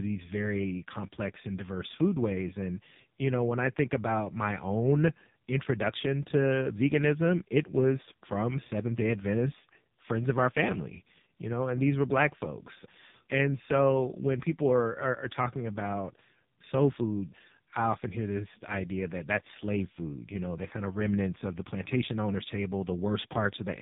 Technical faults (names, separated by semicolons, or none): AMR narrowband mobile codec